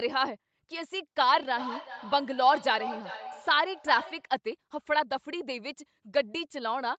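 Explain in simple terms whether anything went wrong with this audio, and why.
Something went wrong: a feedback echo between two devices. Two devices in one room shared the call, one played the other's microphone aloud, and that microphone caught it again. From 1.2 to 4.31 s, speech comes back roughly every 0.4 s, quieter and thinner.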